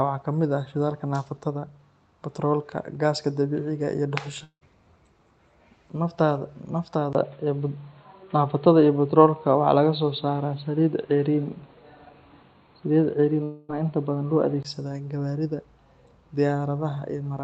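Audio from about 4.43 to 4.63 s likely never arrived over the network, a long network dropout. The receiver extends the last sound for roughly 0.18 s as a fading buzz before a brief silence, and speech resumes with that stretch missing.

At 7.13 s the input likely switched to a poorer device. After a 20 ms gap, the sound turns dull and boxy with nothing above 4.4 kHz. The level shifts by a few dB, and a new noise floor sits around 40 dB under the speech.

A second long network dropout at 13.43 to 13.71 s behaves the same way. Here the concealment fills almost the whole 0.26 s gap with a decaying buzz and no silence before the sound resumes. The narrowband tone ends at 14.65 s, where the brighter original input returns.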